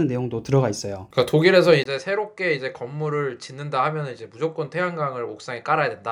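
At 1.84 s the speech drops out for 20 ms, then returns about 5 dB quieter, with nothing above 10.6 kHz and a new noise floor roughly 45 dB down. The input likely switched to a poorer device that held through to the end.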